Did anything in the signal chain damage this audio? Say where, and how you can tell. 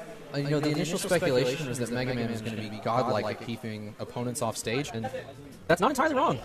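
Yes. From the very start until 3.58 s there's a doubled audio track: a second, clean copy sits around a tenth of a second behind, about 5 dB down, with no room tail, then drops out abruptly. It's likely a slower second capture path or an edit holding two copies out of step.

From 4.69 s to the end there's a time-stretched section. The pace jumps to 1.69 times normal and sounds rushed, yet pitch doesn't rise. That likely points to software squeezing the audio to fit a length, dropping short pieces to keep pitch.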